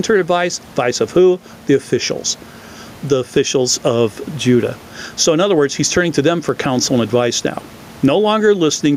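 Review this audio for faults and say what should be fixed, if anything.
Gain pumping runs through the whole recording. The room noise sits about 33 dB below the speech, and the gain swings by around 10 dB. That pumping, rather than the abrupt cut of a noise gate, likely comes from excessive input gain driving a fast limiter. Lower the microphone preamp gain so the limiter rarely engages.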